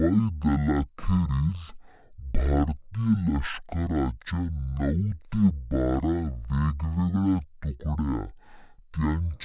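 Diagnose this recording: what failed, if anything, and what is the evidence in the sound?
A wrong sample rate at the playback stage: the samples are clocked out at half the rate they were captured at, with no resampling. That fits audio recorded at 16 kHz being played at 8 kHz. From start to finish the speech runs at half speed, drawn out and sluggish, and the pitch drops a full octave (12 semitones), so every voice sounds deep. Speed and pitch shift together by the same 0.5 ratio.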